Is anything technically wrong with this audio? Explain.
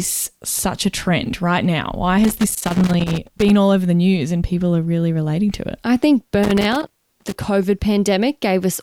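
Yes. A worn or dirty contact somewhere in the signal chain is intermittently losing connection, producing loose connector crackle from 2.24 to 3.50 s and again from 6.43 to 7.36 s. As the connector shifts, the contact rapidly makes and breaks, chopping the speech signal on and off, and any DC present on the line turns each break into a pop. The result is an irregular burst of scratchy crackle over the speech.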